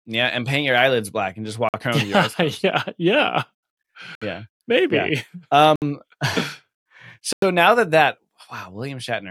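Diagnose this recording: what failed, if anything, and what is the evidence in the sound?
The wireless playback link, likely a Bluetooth stall, starved the headphone buffer four times. The speech drops to silence at 1.69–1.74 s, 4.15–4.22 s, 5.76–5.82 s and 7.33–7.42 s (50, 64, 62 and 94 ms), then resumes once retransmitted packets arrive.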